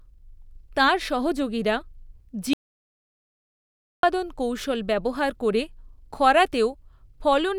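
At 2.53 s the input signal was likely lost upstream while the recorder kept writing silence, an audio dropout to silence. The speech cuts off mid-flow into 1.5 s of silence, with no room tone, until it resumes at 4.03 s on "কৌশল ব্যবহার করে".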